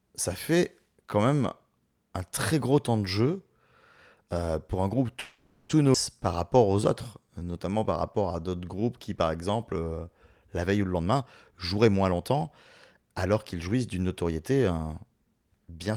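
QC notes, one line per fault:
5.19 to 5.72 s, call audio freeze: right after "euh pour un groupe" the last sound carries on as a fading buzz for about half a second before the speech resumes where it stopped, with nothing lost. This is likely packets held up in transit while the jitter buffer ran dry.
5.93 s, skip ahead: playback jumps forward with almost no gap, and roughly a third of a second of speech is missing, its two sides joined nearly directly. A stretch was dropped while later audio was already queued, trimming the delay built up by the freeze.
6.29 to 6.78 s and 7.21 to 9.85 s, jitter buffer slow-down: speech drags at unchanged pitch, sounds drawn out, first at 92% speed, adding 49 ms, then at 90%, adding 274 ms. The receiver repeated single pitch periods or pause fragments to rebuild a depleted buffer.
10.91 to 12.43 s and 12.96 to 14.79 s, jitter buffer speed-up: following "la veille ou le" the speech sounds hurried at the same pitch, running at 120% with roughly 300 ms cut, then 110% with roughly 200 ms cut. 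Short pitch-period pieces were removed to shrink an overfull buffer.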